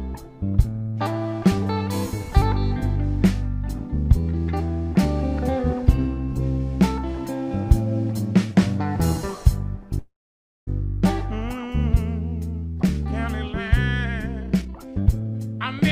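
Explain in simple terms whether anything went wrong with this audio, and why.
Two things go wrong, both near the end.

From 9.99 to 10.69 s the sound stops flowing. There is a short fading buzz, then about 0.58 s of near silence, and then the audio picks up exactly where it left off. This is a call audio freeze. The likely cause is data arriving late, so the receiver had nothing new to play and stretched out the last bit of sound while it waited. Unlike a dropout, where a piece is lost, nothing is missing here. About 0.68 s of waiting was inserted, and everything after it simply runs that much later.

From 14.41 to 15.81 s the audio suddenly sounds rushed, playing at about 142% of normal speed. This is a jitter buffer speed-up. After the freeze the receiver had fallen behind, so it caught up by snipping out many tiny slices of sound in quick succession, about 0.7 seconds in total. The pitch stays the same, which tells it apart from a tape running fast, where everything would also sound higher.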